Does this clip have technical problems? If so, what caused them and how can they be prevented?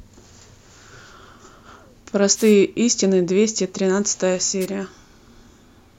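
Yes. Wireless microphone noise hits occur at 2.34 to 2.55 s and again at 4.60 to 4.66 s, heard as brief swishes of static over the speech. The FM radio signal faded as reflected paths cancelled at the receiver, so receiver noise rose into the audio. Keeping a clear line of sight between transmitter and receiver and using a diversity receiver with well-placed antennas prevents these dropouts.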